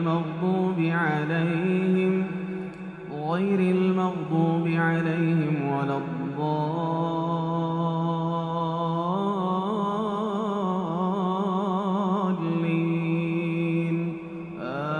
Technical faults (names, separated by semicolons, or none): none